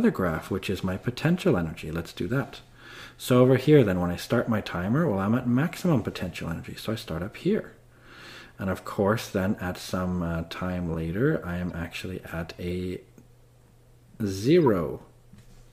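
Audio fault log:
11.71 s, corrupt frame decoded: a couple of damaged compressed frames got played anyway, so misread codes throw a brief blip of misplaced energy, roughly 40 dB down.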